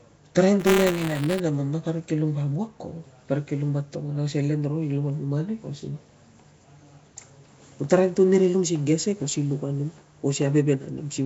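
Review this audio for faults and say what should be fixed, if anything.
Throughout, the speech has a rough, hissy halo and a smeared, underwater quality. This is likely Nellymoser compression: coarse two-bit coding starves weak bands, which are then filled with noise, consistent with roughly 32 kbps. Prevent it by capturing or exporting through a modern codec such as Opus or AAC at an adequate bitrate.

From 0.59 to 1.40 s there is buffer tearing, heard as a robotic buzz at about 200 Hz. The writer and reader of the ring buffer have slipped, so a small slice of each period holds audio from about 20 ms earlier, with hard joins on both sides. Prevent it by keeping write and read pointers safely separated, with enough headroom in the buffer and a resync whenever they drift together.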